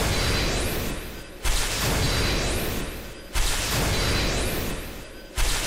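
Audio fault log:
2.04–2.06 s and 3.58 s: lost LE Audio frames. The 22.5 ms and 15 ms gaps were covered by repeating the last spectrum with random signs, leaving brief noisy smears.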